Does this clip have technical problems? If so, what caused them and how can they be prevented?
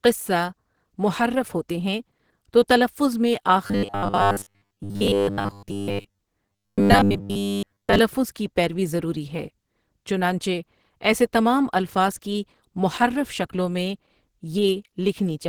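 Yes. Opus compression runs through the whole speech clip, with plainly audible codec damage. The speech sounds hoarse, grainy and somewhat muffled, which fits the encoder running in its hybrid speech mode at a low rate, likely a stream around 16 kbps, where too few bits leave the tone rough. Giving the encoder a higher bitrate would prevent this.

Robotic sound from repeated short buffers appears from 3.67 to 6.21 s and again from 6.47 to 7.99 s. New audio arrived too seldom, so playback filled the gaps by looping a 10 ms slice. That repetition imposes a rigid, metallic 100 Hz buzz, and most of the real audio in those stretches is skipped and replaced by repeats. The likely cause is buffer underruns. Larger playback buffers or steadier audio delivery would prevent it.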